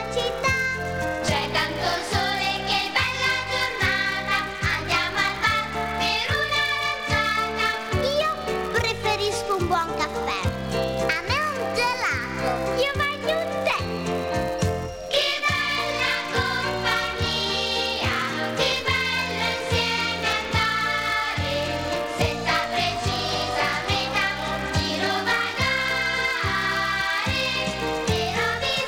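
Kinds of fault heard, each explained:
Filter restarted on every block: the filter discards its internal state at each block boundary and starts the next block as if from silence, so every block opens with a small transient. The transients repeat at about 172 Hz, which fits a 256-sample block, and they merge into a steady buzz under the sound for the whole clip, growing louder where the signal is loud and fading where it is quiet.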